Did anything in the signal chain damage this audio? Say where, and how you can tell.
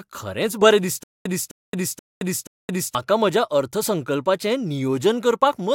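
Yes. From 1.04 s to 2.95 s the speech falls into a stutter with silent gaps. A burst about 259 ms long plays, then about 220 ms of dead digital silence follows, and the same burst returns. It repeats four times at an even 479 ms period. The stage is likely playback or stream buffering. The player stalled and replayed its last fragment on each retry, then ran empty. The audio due in that span never arrives.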